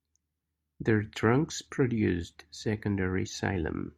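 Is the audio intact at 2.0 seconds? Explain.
Yes, the speech runs through 2.0 seconds with no dropout, click, glitch or other audible fault at that moment.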